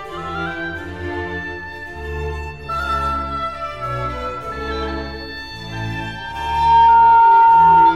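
At 6.17 s the music is overtaken by loudspeaker feedback squeal, which runs to the end at 7.96 s. A microphone is hearing the speaker it drives, and around 917 Hz the loop gain tops one, so that tone feeds itself, swelling over about half a second to sit roughly 15 dB above the music. A spectrogram shows a single bright horizontal line at 917 Hz; the waveform's envelope balloons into a dense, steady block.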